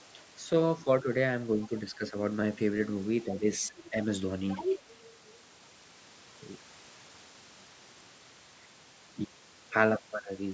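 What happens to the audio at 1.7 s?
Other side's voice leaking through, 1.62 to 1.67 s: a faint second voice, well below the main talker, slips in briefly, likely because the echo canceller left loudspeaker sound in the microphone. Speech suppressed in double talk follows, 1.67 to 1.73 s: the speech dips by a few decibels for a brief moment, likely because the canceller turned everything down while both sides overlapped.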